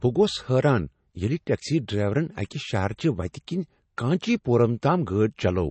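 From start to finish the speech has a hard ceiling, with nothing above 8.3 kHz, plus a watery, swirly texture and metallic chirps on the s sounds. That's plainly audible damage, most likely MP3 compression starved of bits, which fits a low bitrate around 32 kbps.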